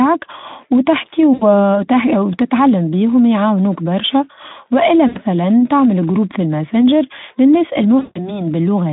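Speech over what sounds like a narrowband Speex line (about 200 Hz to 3.7 kHz, lightly coloured) with three spots of VoIP packet loss concealed by the speech codec. At 1.33 to 1.44 s, and again at 5.07 to 5.18 s, between "بيهم يعاونوك برشا والا" and "تعمل جروب في الماسنجر", about 80 ms goes missing. The decoder fills each gap by repeating its last pitch and filter as a fading buzzy smear. The longest, 160 ms after "جروب في الماسنجر للناس", runs from 7.99 to 8.39 s, and the sound stays weak well after the gap while the decoder recovers.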